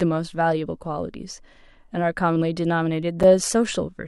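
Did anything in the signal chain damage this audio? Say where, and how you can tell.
Yes. At 3.23 s the speech drops into a hard-edged hole of silence, about 6.4 ms long: a gap between stream segments at playback, where the player filled a timing gap with silence.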